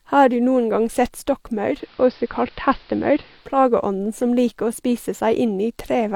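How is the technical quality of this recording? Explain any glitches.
The recording has one glitch, a brief drop in broadcast quality.

From 1.65 to 3.58 s, digital radio blends to analogue. The receiver lost the digital stream and cross-faded over about 250 ms to the AM signal. The level shifts by about 2 dB, and faint hiss appears about 35 dB down.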